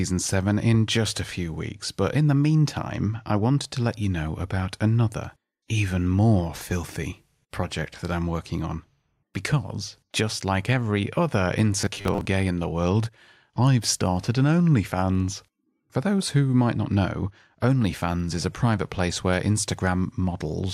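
From 11.81 to 12.26 s the speech goes robotic, a rigid metallic buzz near 100 Hz, likely from a repeated 10 ms buffer filling in while about 40 percent of the real audio got skipped.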